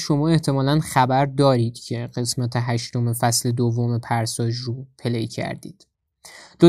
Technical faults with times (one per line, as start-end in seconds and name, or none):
none